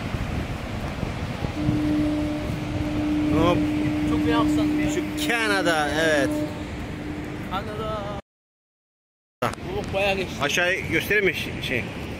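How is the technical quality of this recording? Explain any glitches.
There is one clear glitch: an audio dropout to silence from 8.20 s to 9.42 s, removing about 1.2 s of sound. The input was likely lost briefly while the recorder kept writing silence, so the sound stops abruptly, leaves complete silence with no room tone, then resumes mid-flow. On a waveform the gap is a flat line. On a spectrogram it is a blank vertical band.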